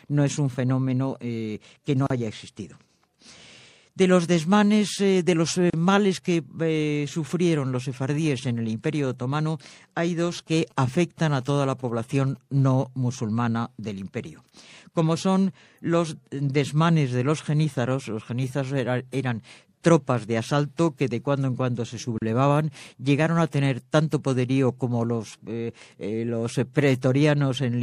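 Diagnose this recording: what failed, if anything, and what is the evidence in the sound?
The codec stage is the likely source of the plainly audible damage across the whole clip. The speech has a watery, swirling quality with a dulled top end, and sibilants sound brittle. That fits MP3 compression at a low bitrate, around 64 kbps. The encoder cuts the treble at a fixed point and zeroes quieter spectral lines that flicker on and off from frame to frame. Consonant attacks also smear.

Three short silences break continuous speech, which points to a gap at a join of encoded pieces, a storage or editing-stage fault. The first, about 38 ms at 2.07 to 2.10 s, falls between "fenómeno eh que no" and "haya existido". The second, about 34 ms at 5.70 to 5.73 s, falls between "eh de los eh" and "males que". The third, about 36 ms, is at 22.18 to 22.22 s. Each segment kept its encoder start-up delay and final-frame padding, so speech resumes exactly where it stopped.

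From 10.38 to 12.84 s, between "hay dos" and "musulmana del imperio como", a galloping dit-dit-dit of short buzzes sits about 30 dB below the speech. This is GSM signalling bursts entering the analogue wiring. A nearby 2G phone transmits short groups of radio bursts while signalling, and the audio circuitry rectifies them into an audible buzz at about 217 Hz, the burst repetition rate.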